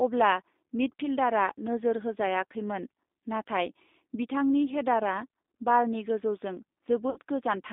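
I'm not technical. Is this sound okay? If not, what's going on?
No. G.729 codec, throughout: the call squeezes speech into a compact synthetic rebuild, so it sounds thin and slightly rough, missing everything above about 3.7 kHz. VoIP packet loss concealed by the speech codec, 7.10 to 7.18 s: about 60 ms of audio went missing, and the decoder filled the gap by stretching the last sound into a fading smear.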